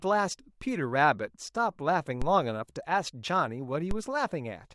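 Speech with two DC steps, at 2.22 s and 3.91 s: the zero line jumps by about -20 dBFS, giving a low thump that settles back as a 5 Hz high-pass drains the offset.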